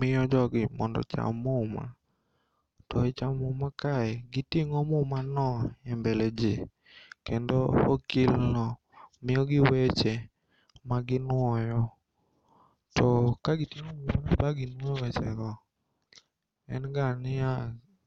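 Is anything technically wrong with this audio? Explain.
No, nothing technically wrong stood out on listening to this speech recording.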